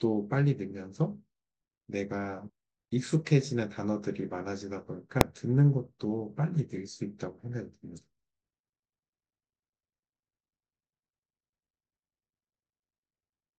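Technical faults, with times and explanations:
5.21 s, invalid numbers at full scale: a single sharp bang sounds, far louder than anything around it and over almost instantly. Its length of about 0.67 ms fits a 32-sample processing block. A calculation in that block produced infinite or invalid values, and these were clamped to the largest value the format can hold, so the output was pinned at full scale for the whole block. Because the block is so short, the jump to full scale and the drop back merge into one bang instead of two separate pops.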